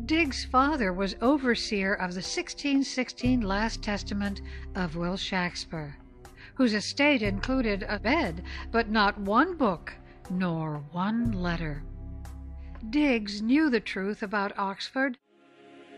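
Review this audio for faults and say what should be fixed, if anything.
Nothing here needs fixing; no faults were found.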